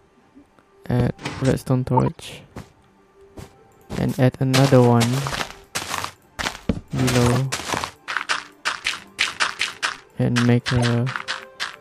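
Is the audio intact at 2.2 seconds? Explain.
Yes, barely. A corrupt frame decoded fault runs from 1.97 to 2.16 s. Damaged frames were played anyway, giving a loud, chirpy noise burst that ends just before.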